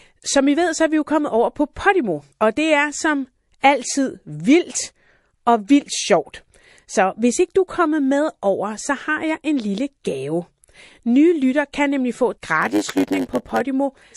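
From the start, the speech has a watery, swirly edge with chirpy sibilants, likely from MP3 compression at a low bitrate around 48 kbps. A spectrogram would show weak high-frequency lines flickering on and off between frames.

At 1.73 s, just after "jo kommet over på", a short hiss leads a sharp attack by about 29 ms, rising about 13 dB above the quiet before it. At 3.60 s, after "og det er som" and before "altid vildt og vildt", the same pre-echo lasts about 33 ms and is louder, about 22 dB up. The smear points to long transform blocks of about 48 ms that never switched to short ones. On a waveform, the noise looks like a fuzzy ramp just ahead of each onset.

From 12.61 to 13.61 s, after "kan nemlig få et", a block size mismatch (padded) puts a short zero-filled gap in every block. That produces a 100 Hz buzz, and the audio runs at 0.919 times normal speed, about 8% slow, at roughly its usual pitch. 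A waveform would show evenly spaced flat dropouts 10 ms apart, and a spectrogram would show thin vertical stripes at the same spacing.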